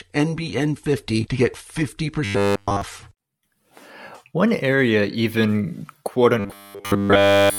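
From 2.25 to 2.82 s, and again from 6.40 s to the end of the clip, the speech collapses into robotic sound from repeated short buffers. Both stretches carry a rigid, metallic buzz at 100 Hz that only loosely tracks the speech. The likely cause is new audio arriving too late, with the playback looping a roughly 10 ms slice to fill the gap. Almost nothing fresh gets through in these spans.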